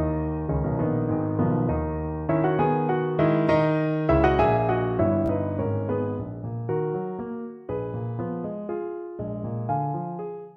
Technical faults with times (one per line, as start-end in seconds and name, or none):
5.26-5.29 Bluetooth stutter